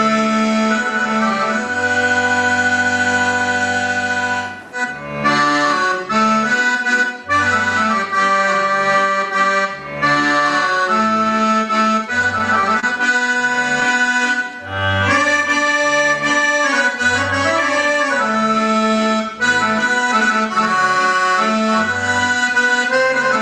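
From 11.80 to 14.38 s there are scattered short gaps. About ten packets went missing or arrived late. Each hole was filled by extending the sound just before it. Around a tenth of a second is patched in total, the longest gap roughly 30 ms. Brief ticks and small smears result.

Overlapping this, from 13.87 to 14.87 s, comes a jitter buffer slow-down. The receiver stretched the sound to rebuild its reserve, adding 71 ms. Playback runs at 93% speed with unchanged pitch. The sound drags slightly and may warble.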